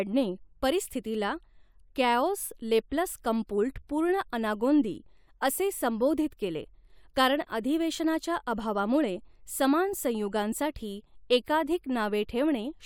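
Nothing technically wrong turns up in this speech recording, so there's no fault to point to or explain.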